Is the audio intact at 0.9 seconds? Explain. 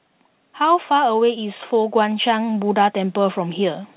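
No. At 0.9 seconds the automatic gain control is early in an automatic gain rise that runs from 0.58 to 3.82 s. It judged the input too quiet and kept increasing its gain, by about 8 dB overall. The speech and the background noise swell together, so the level creeps upward instead of holding steady. Throughout, the call path's band limit cuts off everything above 4 kHz, which points to G.711 mu-law coding.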